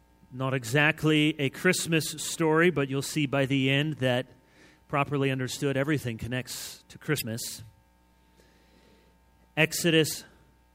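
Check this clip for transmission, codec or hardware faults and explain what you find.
Two short faults are present, both damaged data in a compressed stream. At 7.17 to 7.22 s and again at 10.10 to 10.14 s, part of the encoded data arrived wrong, so the decoder could not read those frames correctly and lost sync until it found a valid frame header. Each event lasts about 45 ms and is heard as a brief squawk or blip that breaks abruptly into the audio before it continues.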